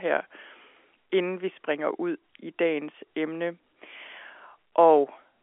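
No technical faults are audible.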